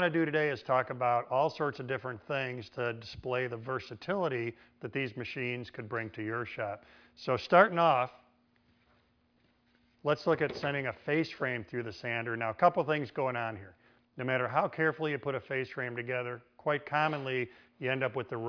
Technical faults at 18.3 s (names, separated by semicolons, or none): none